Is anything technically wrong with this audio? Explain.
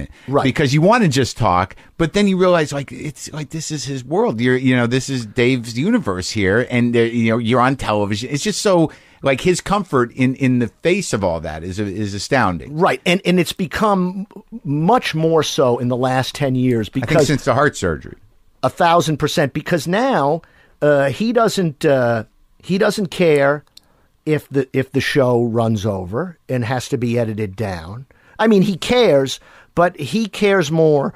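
No, nothing technically wrong stands out here; the speech comes across steady and intact the whole way, with nothing that needs flagging.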